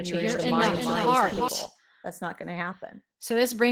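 A speech recording carries plainly audible Opus voice compression throughout, consistent with hybrid mode at about 16 kbps. Coarse excitation coding makes the voice slightly hoarse and robotic. On a spectrogram the upper band looks smeared and patchy, blocky from frame to frame. From the start until 1.48 s a doubled audio track is present: a second full-band copy runs roughly 300 ms behind, about 5 dB quieter, most likely from a second, slower capture path. The waveform shows each onset repeated at that offset, and the copy stops abruptly at 1.48 s.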